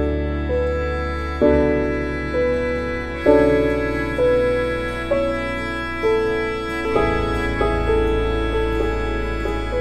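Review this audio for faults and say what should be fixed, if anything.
From 6.85 s to the end, the music abruptly gains a second copy at about the same loudness, trailing roughly 0.7 s behind, dry and without decay. This doubled audio track is likely the signal captured again through a slower path, or an edit stacking two offset copies. To prevent it, route the music through a single capture path and check the edit for overlapping duplicate regions before export.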